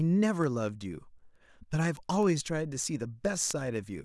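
From 0.18 s to 4.02 s, sharp ticks of uneven strength recur about every 0.3 s, around fifteen in all. These are word clock ticks. The receiver's clock runs roughly 150 ppm off the sender's, so one sample slips at each crossing.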